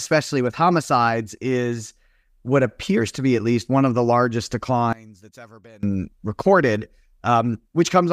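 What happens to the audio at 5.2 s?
At 5.2 s the speech nearly disappears. Just after "one of the largest", from 4.93 s to 5.83 s, the level falls by about 25 dB. What remains is a faint trace of the voice. The cause is likely one channel inverted. With one stereo channel's polarity reversed, the centred voice cancels when the channels are summed to mono. Only the small difference between the two channels survives until the sound returns at 5.83 s.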